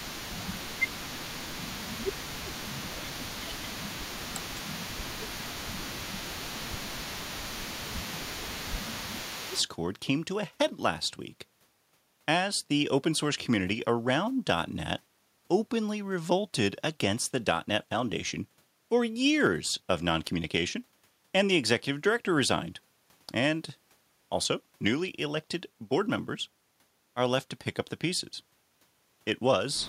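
It's a speech clip, and the first ten seconds or so are where things go wrong. From 0.0 to 9.67 s there's an echo leak: a faint, delayed copy of the talk trailing about 207 ms behind the original, sitting somewhere around 15 dB under the main level. That's most likely a loudspeaker on the far end whose echo canceller didn't fully scrub what its mic picked up, so the leftover got sent back down the line. Overlapping that same stretch, the talker keeps ducking out in three spots, 0.33 to 4.58 s, 5.37 to 6.98 s and 7.99 to 9.58 s, which is speech suppressed in double talk. The level drops by something like 15 dB at its deepest, chewing up roughly three seconds of the first window and about a second and a half in each of the other two. That pattern most likely comes from the echo canceller failing to tell the live talker apart from its own loudspeaker echo while both sides were talking, so it turned everything down together.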